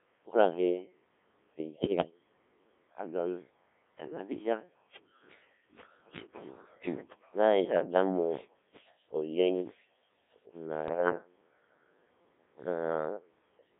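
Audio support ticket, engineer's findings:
Robotic, buzzy speech throughout. Band limited to about 250 Hz to 3.6 kHz. Codec 2 vocoder, a sine-wave resynthesis from pitch and envelope. Artefacts fit roughly 1.3 kbit/s.

Bleeps and warbling gibberish, 1.73–2.11 s (severe) and 10.88–11.18 s (milder). Bit errors on digital voice radio. Flipped bits scramble the pitch, level and voicing of each frame.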